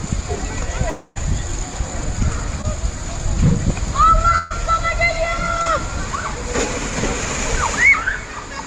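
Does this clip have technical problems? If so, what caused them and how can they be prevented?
Yes. A long network dropout from 0.89 to 1.18 s, likely from a connection stall, loses about 260 ms, bridged by a fading continuation of the previous sound. A steadier connection or a larger jitter buffer would prevent it.

A burst of packet loss at 4.38 to 4.52 s drops about 120 ms. The receiver stretches the last sound into a fading buzz or hiss before playback resumes further on. Forward error correction or redundant packets would recover such bursts.

Short concealed packet loss at 2.62 to 2.65 s and 5.62 to 5.68 s drops 20 to 40 ms, filled by brief extrapolation that leaves a small smear. Reducing network congestion would prevent these.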